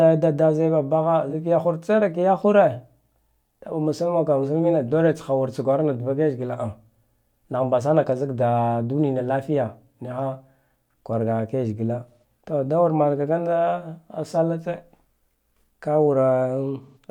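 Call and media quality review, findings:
Smeared, noisy, phasey patch at 1.29–1.33 s (43 ms, fits one lost frame); longer smeared dropouts at 12.08–12.24 s and 16.82–16.98 s (128 ms each, about three frames). AAC frame loss with concealment: the decoder rebuilds missing frames from the last good spectrum.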